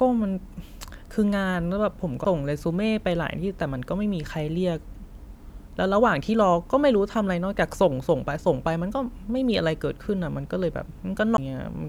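At 2.24 s and again at 11.37 s the speech shows a CD skip: the pickup lost tracking and landed on a different turn of the spiral, so playback mutes for a few milliseconds and then resumes out of place, heard as a tick and an abrupt jump in the speech.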